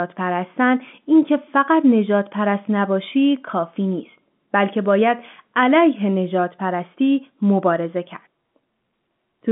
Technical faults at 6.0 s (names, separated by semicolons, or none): none